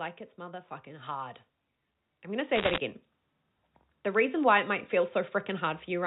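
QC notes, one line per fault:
2.56–2.78 s, bit errors on a digital phone line: just after "I'm going to", a burst of sharp ticks crackles over the speech, which carries on unchanged beneath them. Each flipped bit alters one sample of the 8-bit logarithmic telephone signal. A hit on a high-order bit, or on the sign of a loud sample, throws that sample far off and gives a click. Roughly one bit in a hundred is wrong, on a channel whose band stops at 4 kHz, which fits a 64 kbps G.711 A-law line.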